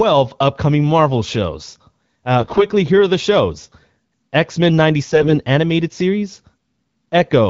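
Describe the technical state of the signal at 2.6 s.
At 2.6 s the audio is inside a burst of AMR bit errors running from 2.40 to 2.64 s, just before "here are the shows". Flipped low-priority bits misplace the excitation pulses and skew fine pitch, gain and spectral values. Pitch and level hold, but the sound turns hoarse, scratchy and gargly.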